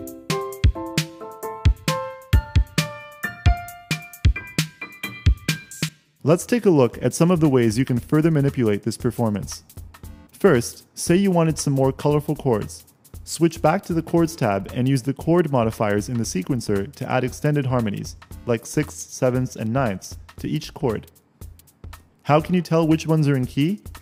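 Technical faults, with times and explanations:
No technical faults can be heard anywhere in the audio. There is nothing to time or explain.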